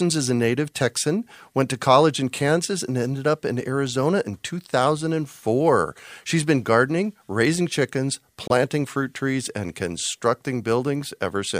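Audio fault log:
8.48–8.51 s Bluetooth dropout: 23 ms gap between "been gardening raising chickens" and "fruit trees and", sound resuming as if uninterrupted; likely late wireless packets discarded.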